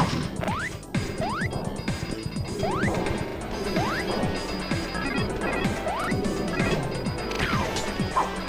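Four stutters from a repeated buffer: at 0.44 to 0.48 s and 6.04 to 6.08 s one piece sounds twice, while at 3.28 to 3.36 s and 7.32 to 7.40 s it sounds three times. New audio arrived late, so the device replayed its last chunk, about 40 ms long, and the sound that should have come next is lost. The copies meet at a hard join, and that exact repetition sets this apart from a dropout, which leaves a gap of silence instead.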